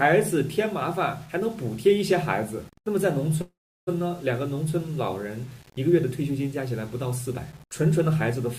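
Grainy distortion that rises and falls with the audio runs through the whole clip, sitting roughly 30 dB below the signal, which points to low bit depth without dither, likely about 7 bits with plain rounding. Because the error tracks the signal rather than forming a steady hiss, quiet passages turn gritty and the faintest moments sputter or collapse to silence, which sets it apart from dithered quantisation or ordinary background noise. From 3.41 to 3.89 s there is a call audio freeze, likely caused by a jitter buffer running empty: the last sound is stretched into a fading buzz or hiss that then drops to silence for about 350 ms before the audio carries on. About 457 ms of filler is inserted, yet nothing is lost, since playback resumes exactly where it stopped and everything after it is simply pushed later. That is what separates it from a packet-loss dropout, which removes a stretch of audio instead of delaying it.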